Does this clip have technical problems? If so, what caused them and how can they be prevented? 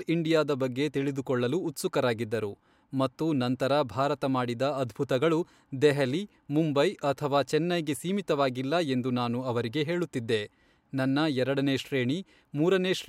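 No, there are no technical faults to be heard in this speech clip. With nothing going wrong, there is no cause to trace and nothing that needs preventing.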